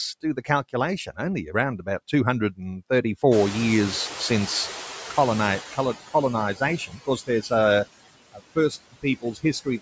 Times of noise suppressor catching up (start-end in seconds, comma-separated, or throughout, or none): 3.31-5.97